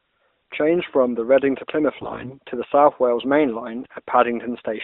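AMR bit errors break into this speech at 2.02 to 2.34 s and again at 3.82 to 3.99 s. The weakly protected bits of each mobile frame arrived flipped, at something like one bit in seven, while the check on the critical bits still passed. The decoder therefore placed its excitation pulses wrongly and misread fine pitch, gain and spectral values. Both stretches keep roughly their pitch and loudness but turn hoarse, scratchy and gargling, within a narrowband line whose light coding fits 12.2 kbps AMR-NB.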